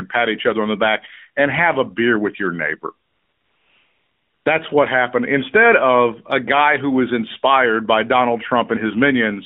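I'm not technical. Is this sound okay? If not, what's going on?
No. There is a fault called AMR comfort noise, right after "beer with your neighbor". From 3.08 to 4.46 seconds, about 1.4 seconds, the phone decided nobody was talking and stopped sending the real sound. The receiving phone filled that gap with fake, smooth hiss. The real background vanishes and then snaps back. The rest has the thin, narrow tone of a mobile call.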